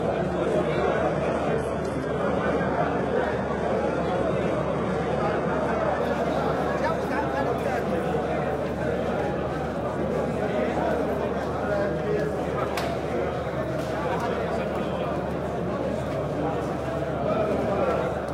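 For the first 6.0 seconds you get a classic case of an adaptive stream starting at a low bitrate. The player grabs a cheap version so playback begins fast, and the top end sounds thin and fake, that swishy reconstructed treble you'd expect from HE-AAC at something near 16 kbit/s, with heavier smearing on these everyday sounds. At 6.0 s it jumps, with no gap, to a much cleaner version, consistent with AAC-LC around 96 kbit/s, though even then nothing comes through above about 16.4 kHz.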